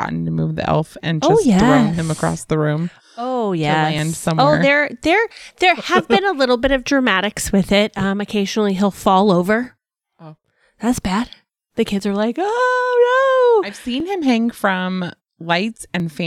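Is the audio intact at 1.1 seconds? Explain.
Yes, the audio is intact at 1.1 seconds, with no dropout, click, distortion or other fault at that point.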